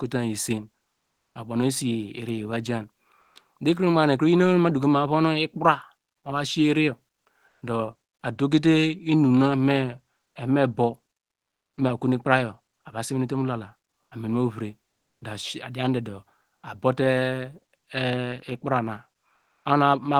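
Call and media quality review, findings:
Comfort noise in place of the background: pauses at 0.97–1.35, 3.21–3.35, 7.47–7.61 and 19.35–19.65 s go flat and featureless, with the level shifting about −3, −4, +3 and −7 dB. Likely Opus DTX: the sender halts during silence and the receiver synthesises shaped noise.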